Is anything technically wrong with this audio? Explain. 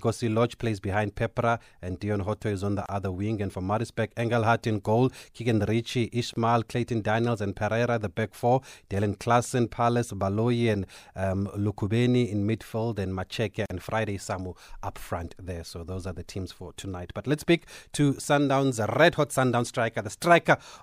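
Yes. Gaps at joins of encoded pieces occur at 2.86 to 2.89 s (about 28 ms), 6.34 to 6.36 s (26 ms) and 13.66 to 13.70 s (45 ms). Separately encoded sections were joined untrimmed, so each seam keeps encoder start delay and last-frame padding. The speech drops into brief silence with smeared edges, then resumes where it stopped.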